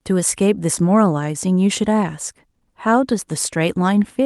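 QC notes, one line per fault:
No faults heard.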